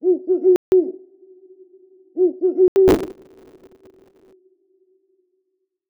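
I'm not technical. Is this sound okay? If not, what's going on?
No. There are two separate problems.

The first is a block of digital silence, which happens twice: from 0.56 to 0.72 s, and again from 2.68 to 2.76 s. Each time, the sound drops out completely and then comes straight back, with no fade. The first gap is long enough to hear as a hole, and the second is shorter, about half as long. These are single, clean dropouts, not a rough texture.

The second is processor overload crackle, from about 2.88 to 4.33 s. The computer fell behind and kept missing its tiny deadlines, many of them in a row. Each deadline covers a very short slice of sound, a few thousandths of a second. Each time one is missed, a scrap of sound that has already played is repeated. Unlike the silent gaps, the sound never actually stops here. It keeps going with a gritty, tearing crackle over it until the overload passes.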